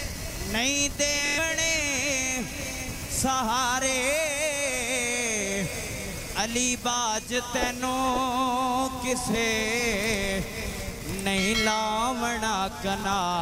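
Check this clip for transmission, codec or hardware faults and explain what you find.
Bluetooth stutter shows up three times: at 1.26–1.39 s, 9.31–9.35 s and 13.01–13.04 s. When data arrived late or never, the receiver kept replaying its last short buffer. The first event covers about 116 ms and comes out as a rapid machine-gun buzz. The later two last about 23 ms each and are single brief catches. Unlike a plain dropout, there is no silence, only a repeated slice. The sound then picks up further on, skipping the missing stretch.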